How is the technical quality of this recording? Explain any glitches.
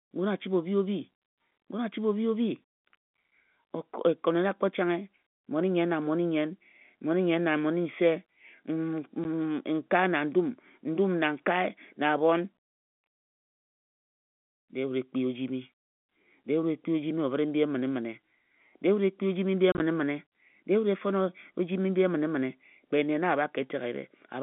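Two short dropouts break up the speech, heard through a narrow telephone band of about 150 Hz to 3.5 kHz, carried in G.711 coding. Both are packet loss filled with silence: one 10 ms hole at 9.24 s, then about 50 ms of gaps scattered across 19.72 to 19.8 s, longest 30 ms. The receiver played silence for missing packets, likely 10 ms each, so the audio cuts abruptly with hard edges.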